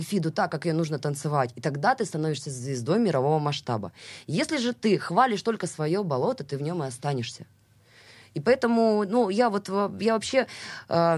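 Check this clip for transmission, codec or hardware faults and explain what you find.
No faults can be heard anywhere in this recording.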